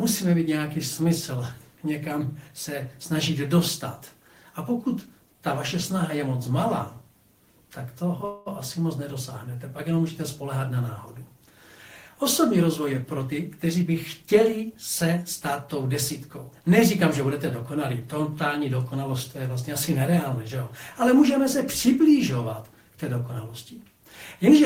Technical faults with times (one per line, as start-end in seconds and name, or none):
8.25-8.48 call audio freeze
12.62-15.25 jitter buffer speed-up